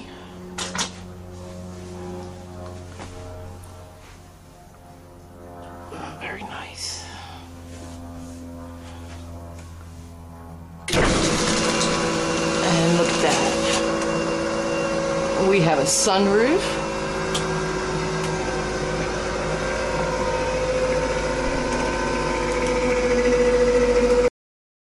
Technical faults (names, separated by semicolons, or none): cut-off end